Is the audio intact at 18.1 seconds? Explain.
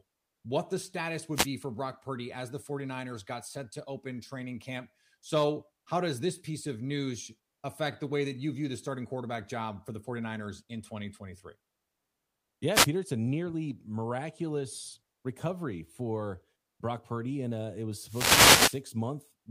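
No. A wireless microphone noise hit runs from 18.03 to 18.83 s, just after "uh it was". The analogue FM radio link fades as reflected signals cancel. Receiver noise rises. It sounds like a brief swish of static.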